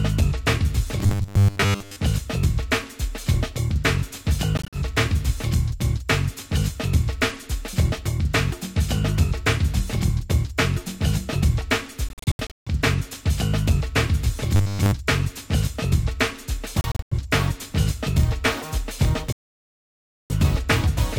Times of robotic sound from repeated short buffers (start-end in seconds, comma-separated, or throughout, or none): 1.00-1.97, 14.56-14.93